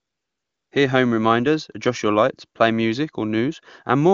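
A speech clip that opens with AMR comfort noise from 0 to 0.71 s. The phone stopped sending speech frames and the receiver substituted smooth synthetic noise, which shows as a flat, featureless band on a spectrogram. The clearly coded wideband speech that follows points to a high AMR-WB rate.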